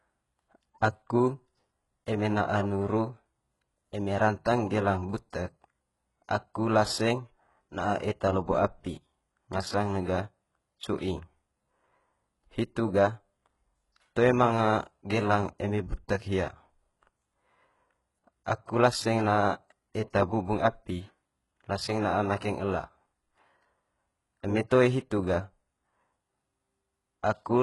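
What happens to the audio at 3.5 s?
At 3.5 s you're hearing the same heavy damage that runs through the whole clip: gritty, lispy s sounds and a synthetic-sounding treble that stops at about 11.5 kHz. It's likely HE-AAC compression, rebuilding the top end from copied lower bands, which fits a very low bitrate around 12 kbps.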